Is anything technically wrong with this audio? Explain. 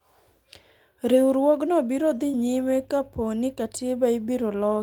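Yes. Around 2.31 to 2.35 s this speech clip has two closely overlapping network faults.

From 2.31 to 2.35 s there is a short concealed packet loss. About 20 ms of audio arrived too late for the decoder, and the receiver covered roughly 18 ms of it by extending the preceding sound before blending back into the real signal. You hear it as a brief smear or wobble. Unlike the rebuilt frame that overlaps it, this stretch is invented from what came before, not decoded from any data.

From 2.33 to 2.35 s a lost packet was rebuilt from error correction. About 20 ms, which points to a single lost packet, was recovered from the low-bitrate backup copy carried in the next packet. There is no gap, but that moment sounds rougher and noisier. That grainy texture sets it apart from the concealment's smeared continuation.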